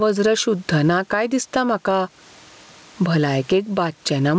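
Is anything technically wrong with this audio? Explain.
Yes. Gain pumping runs through the whole clip. The level keeps breathing. The room noise sits about 40 dB below the speech. The swing is roughly 15 dB. Loud and quiet parts sit too close together, so the speech sounds squashed. The likely cause is microphone gain set far too high, with a fast limiter or compressor clamping down on every peak. Above 8 kHz there is nothing, which fits a wideband call codec.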